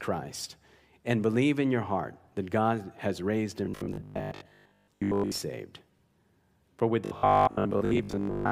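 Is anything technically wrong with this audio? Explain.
Yes. From 3.66 to 5.42 s and from 7.05 s to the end, the speech turns into robotic sound from repeated short buffers: a rigid 50 Hz metallic buzz, most likely from audio arriving too seldom so about 20 ms chunks are replayed while most real audio is skipped. Unlike dropouts, there is no silence; the loop keeps sounding.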